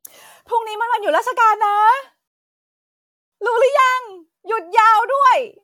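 At 2.28 s the speech hits a rebuffering stall: playback runs dry, goes silent for about 1.04 s, then picks up exactly where it left off, nothing lost.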